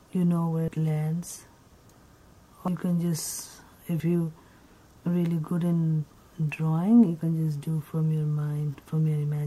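At 0.68, 2.68 and 4.0 s the audio jumps ahead, roughly 70, 100 and 40 ms gone, likely dropped buffers from an overrun, the samples overwritten before being read.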